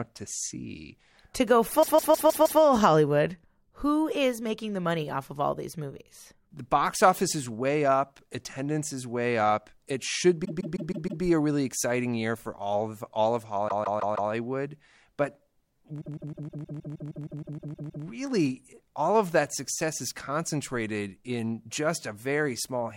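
Speech with repeated frames: the same 157 ms block plays again and again at 1.82–2.60 s, 10.44–11.22 s (before "a really exciting year"), 13.68–14.30 s (after "all of all of"), and 16.00–18.04 s, adding roughly 0.6 to 2 s each time. This fits a run of compressed frames sent more than once. Unlike a natural repetition, each repeat is identical and recurs at a fixed rate.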